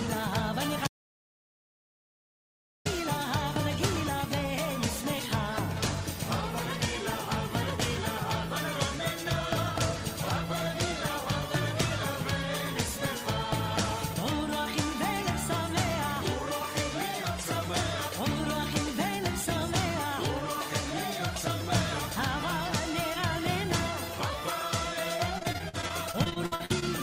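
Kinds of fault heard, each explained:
Audio dropout to silence: From 0.87 to 2.86 s the sound cuts out completely for nearly 2 s, leaving digital silence with no room tone beneath it. The likely cause is the input being lost while recording continued writing zeros, so that stretch is simply gone.
Repeated packet loss (robotic sound): From 25.17 to 26.84 s a rapid series of short holes, none longer than about 57 ms, breaks up the sound. Each is patched by extending the previous sound, and about a quarter of the span is filled this way, giving a choppy texture with pieces missing.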